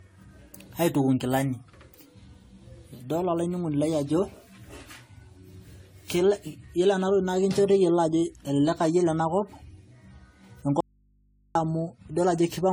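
Throughout the speech the sound is swirly, smeared and hollow, with softened consonant attacks, more degraded than a single AAC-LC pass near 64 kbit/s would give. The likely cause is generation loss: roughly ten successive decode and re-encode cycles, each re-quantising on a shifted frame grid.

From 10.81 s to 11.55 s the signal cuts out abruptly for about 0.75 s. Only mains hum remains, about 40 dB below the normal level, before the sound returns mid-flow. This is an audio dropout to a faint residue, likely from the source being lost while the downstream input stayed live.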